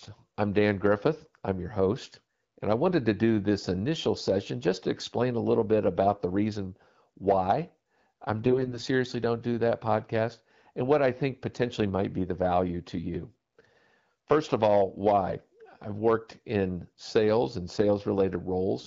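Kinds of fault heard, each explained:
AMR bit errors: From 8.46 to 8.82 s, right after "the reason why I'm", the speech turns hoarse, scratchy and gargly while keeping roughly its pitch and level. Flipped low-priority bits, around a tenth of them, misplaced excitation pulses and skewed fine pitch, gain and spectral values.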